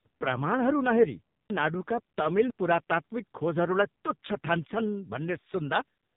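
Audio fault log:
throughout: AMR narrowband mobile codec, nothing above 3.8 kHz and a buzzy, synthetic sound that fits roughly 5.9 kbps AMR-NB; the spectrogram shows a hard ceiling with smeared harmonics.
1.5–2.5 s: chunks out of order. After "प्रमाणहरू नहेरी", a 500 ms chunk plays one chunk late, giving a jumbled moment; the waveform shows abrupt discontinuities at the joins.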